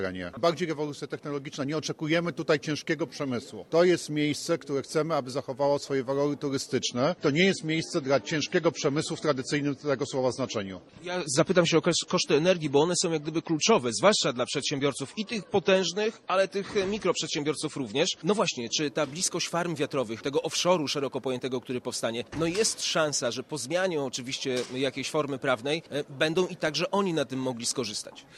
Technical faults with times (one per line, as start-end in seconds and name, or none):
6.82-18.82 adaptive stream at a lower bitrate